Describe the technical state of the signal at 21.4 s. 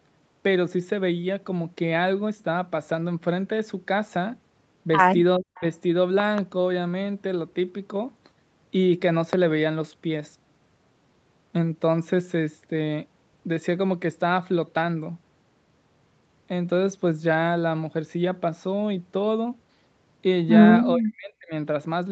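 The speech sinks sharply, by roughly 40 dB at its deepest, between 20.94 and 21.53 s. This is likely speech suppressed in double talk: with both sides talking at once, the echo canceller mistook the talker for loudspeaker echo and attenuated it.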